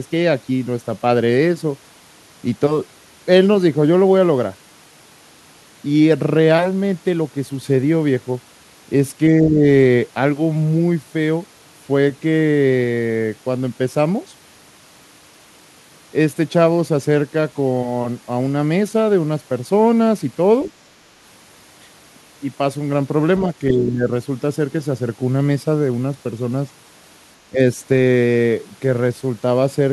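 A speech recording where the talker gets ducked three times by what sounds like speech suppressed in double talk. At 9.4 to 9.63 s and again at 23.71 to 24.1 s the level sags by around 10 dB, and at 27.5 to 27.59 s it dips harder, closer to 15 dB, for a short bite. The likely cause is the far end talking over them, so the echo canceller can't tell local speech from loudspeaker echo and turns everything down. Separately, at 20.65 to 20.72 s there's a quick scrap of the other side's voice leaking through, faint, roughly 25 dB under the talker, and it's over in well under a tenth of a second. That's likely loudspeaker playback reaching the mic that the canceller didn't fully remove.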